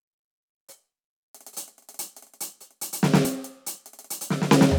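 At 1.99 s and again at 3.25 s the music skips abruptly, losing roughly 10 ms each time. The likely cause is a dropped buffer (overrun). On the waveform the two sides butt together with a discontinuity, and the spectrogram shows a thin vertical broadband line.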